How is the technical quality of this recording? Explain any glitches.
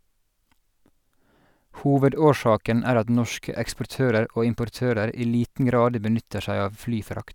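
The technical quality of this recording is good, with no glitches to explain.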